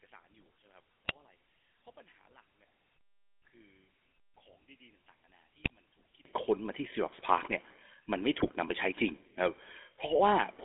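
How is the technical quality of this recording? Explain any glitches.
The recording has three clear problems: coded-telephone bandwidth and texture throughout, a near-cancellation of the sound in the opening stretch, and three short bursts of decoder corruption.

GSM full-rate codec: The whole clip has passed through the original GSM full-rate speech coder at 13 kbps. The coder rebuilds speech from a vocal-tract filter and a sparse pulse excitation, so the result has a buzzy, gravelly edge. It is confined to a telephone band of roughly 250 Hz to 3.5 kHz, with no real low end and no air above it. The coding damage is plainly audible.

One channel inverted: From the start to 6.25 s the level sits about 32 dB lower than it should, and what remains is a faint residue. This is most likely one channel with reversed polarity being summed to mono. Anything common to both channels cancels, including the centred speech and the background, and only the small difference between the channels survives. 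After 6.25 s the full signal returns.

GSM bit errors: Three brief corruption bursts occur, at 1.05 to 1.12 s, 5.64 to 5.70 s, and 8.40 to 8.49 s, each lasting three or four codec frames. Flipped bits reached the decoder at an error rate of roughly 2 to 3 percent. Corrupted filter, pitch and gain parameters distort the spectrum and level for those frames, producing short squawks, pops and gargling through the speech.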